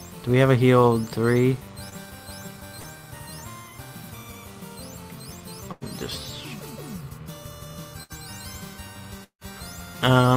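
At 1.89 to 1.93 s and again at 2.79 to 2.86 s there's short concealed packet loss. Roughly 20 ms and then 40 ms never arrived, so the decoder patched each hole by continuing the previous sound, and you hear a quick smear. Around 5.72 to 5.83 s and 8.03 to 8.12 s there's a burst of packet loss, about 100 ms and 60 ms gone. Each gap gets filled with a stretched, fading continuation before the audio picks up further along. At 9.24 to 9.43 s the sound briefly carries on, dies to about a tenth of a second of silence, then returns with a chunk skipped. That's likely a long network dropout.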